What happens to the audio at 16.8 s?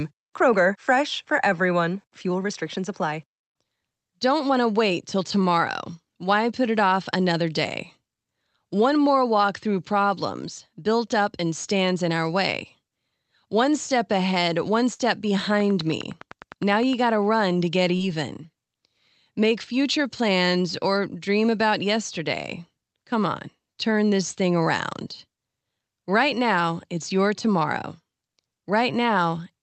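At 16.8 s the speech is overlaid by a steady ticking, part of a train of clicks running from 15.40 to 16.94 s, ending just before "gotta run to get". About fifteen near-identical pulses arrive evenly at 9.8 per second, peaking about 5 dB above the speech and audible between syllables too. Such a regular pulse train likely comes from electrical interference from nearby equipment or a faulty connection or power supply.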